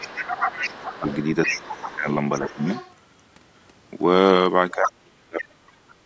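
From the start, two voices overlap. Speech is suppressed in double talk at 0.0, 0.61 to 1.07, 1.47 to 2.07 and 2.43 to 2.65 s, dipping by roughly 10 to 15 dB. The echo canceller likely mistook the talker for loudspeaker echo and turned everything down. Meanwhile the other side's voice leaks through from 0.01 to 2.11 s, only a little quieter than the talker. It likely got past the echo canceller unremoved. A faint leak follows from 2.46 to 2.94 s, roughly 20 dB down. Another strong leak comes at 4.7 to 4.9 s. Then the talker drops deeply, by roughly 30 dB, from 4.71 to 6.01 s.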